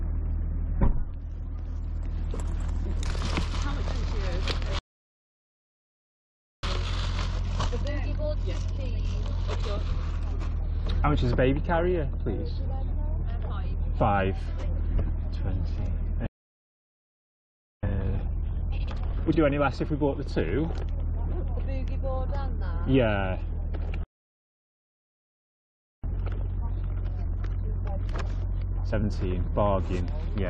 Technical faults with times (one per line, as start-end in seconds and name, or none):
4.79-6.63 playback stall
6.63-9.63 time-compressed catch-up
16.27-17.83 playback stall
17.83-19.39 time-compressed catch-up
24.03-26.04 playback stall
26.04-29.04 time-compressed catch-up